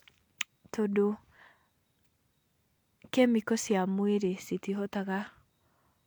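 A short speech recording, and nothing technically wrong turns up anywhere in it.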